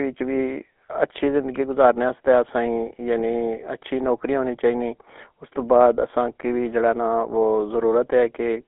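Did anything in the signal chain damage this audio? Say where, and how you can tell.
Yes. Throughout the clip the speech has a buzzy, gravelly roughness and a narrow, boxy band, roughly 250 Hz to 3.6 kHz, with nothing above 3.8 kHz. That points to the GSM full-rate codec, consistent with a 13 kbps stream, rebuilding the voice from coarsely coded pulse excitation.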